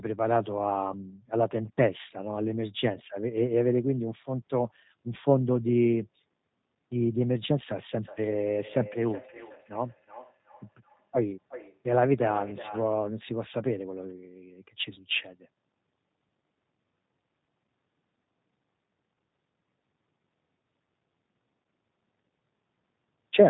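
Speech, carried throughout by the 8 kbit/s G.729 codec, which rebuilds the signal from a filter and pitch model, leaving it rough, synthetic and without anything above 4 kHz. From 8.02 to 13.06 s, feedback echo between two devices occurs as one device replays the other's microphone, so the sound returns roughly every 0.4 s, at most about 14 dB below the direct speech. At 21.63 s, VoIP packet loss concealed by the speech codec fills a 20 ms gap, which fits a single lost packet, with a brief, fading extrapolation.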